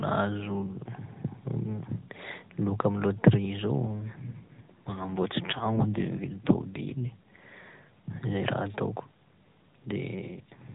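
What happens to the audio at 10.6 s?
An AMR rate drop from 10.22 to 10.74 s, consistent with the mobile codec stepping down from 12.2 to 5.9 kbps, turns the speech rougher and more synthetic, with no gap or band change.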